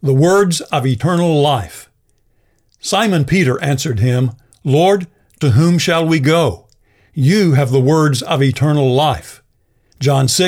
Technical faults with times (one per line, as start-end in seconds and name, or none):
3.37 dropped samples